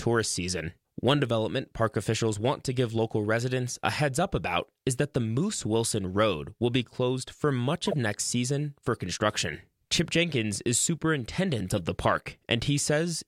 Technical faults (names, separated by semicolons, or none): corrupt frame decoded